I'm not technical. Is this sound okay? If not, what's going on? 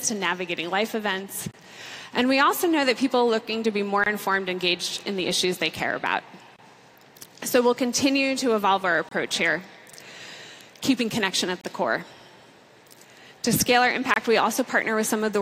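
No, not quite. There's a gap between chunks: the audio arrived in pieces about 2.5 seconds long, and a 25 ms hole of silence sits at each join, at 1.51, 4.04, 6.56, 9.09, 11.61 and 14.14 seconds, so the sound briefly cuts out.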